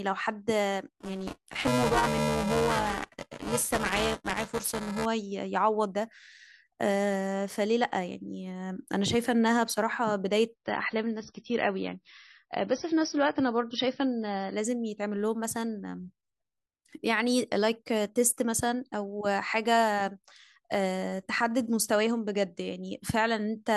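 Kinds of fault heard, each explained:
buffer tearing: A robotic 375 Hz buzz under the speech, 0.94 to 5.05 s, as writer and reader cross each period, consistent with a 128-sample buffer.
adaptive stream at a lower bitrate: An abrupt drop in quality from 10.54 to 14.54 s, with more artefacts, consistent with a switch from 128 to 24 kbit/s MP3.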